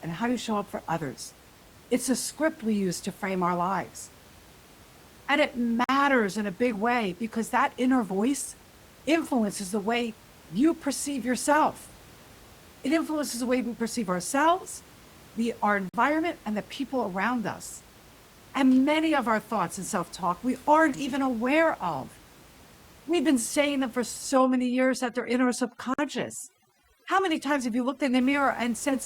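For the first 2.0 s the speech sounds dull and smeared, with the top end thin and synthetic. Then, just before "a script we use", the quality suddenly lifts with no break. This is an adaptive stream starting at a low bitrate. The player began on a cheap encoding, which fits a step from about 32 to 64 kbit/s Opus, and switched up once it had gauged the connection.

At 5.84 s, just before "in a big way", the sound drops out for about 48 ms. The same hole returns at 15.89 s and 25.94 s. That exact 10 s spacing marks a gap between chunks: the audio arrives in 10 s pieces, and each join leaves a short silence instead of running on seamlessly.

From 24.33 s to 28.21 s, after "been saying them for", the background drops and breaks up into twinkling specks. This is overdone noise removal. The room noise sits about 26 dB below the speech, and a suppressor set too hard is cutting whole frequency bands near its noise estimate, taking the softer parts of the speech with them.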